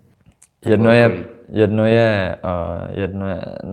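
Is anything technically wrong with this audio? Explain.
Yes. There are two related timing faults.

Clock drift between sender and receiver runs through the whole speech clip. The sender's audio clock runs fast, by roughly five percent. More audio arrives than the receiver plays out in the same time. Its jitter buffer keeps filling up. To stop it overflowing, the receiver must throw away small pieces of sound. The result is a slightly hurried feel, with small timing hiccups at uneven intervals.

Repeated timing corrections are heard from about 0.14 s to 3.69 s. These are the receiver's fixes for that drift. It cuts out short fragments again and again to keep pace. The net playback runs at about 105 percent of the original speed. Every edit goes the same way, toward removing audio. The cuts are small and unevenly spaced. They come across as faint skips and a slightly unsteady, rushed tempo in the speech.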